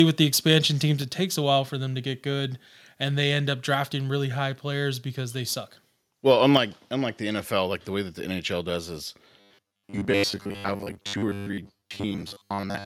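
At 1.02 s and again at 6.57 s the speech and background drop abruptly in level, by about 4 dB and about 5 dB. This is a microphone volume stepped down, likely the call software cutting the device's input gain in a single step.

From 9.41 s to 12.85 s the speech takes on robotic sound from repeated short buffers: a rigid, metallic 100 Hz buzz that loosely tracks the speech. The likely cause is late-arriving audio being filled by looping the last fragment, which fits a 10 ms repeat, so most of the real audio is skipped.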